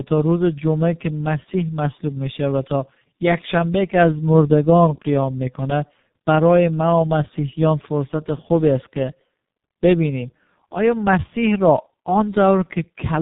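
Tandem speech coding affects this speech throughout: G.723.1 re-coded the already-degraded iLBC output, leaving rough, warbly, muffled sound with nothing above 3.8 kHz.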